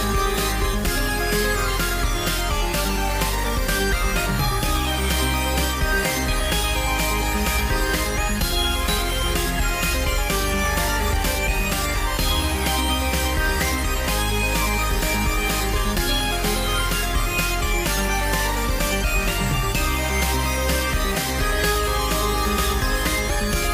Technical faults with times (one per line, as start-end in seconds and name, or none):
none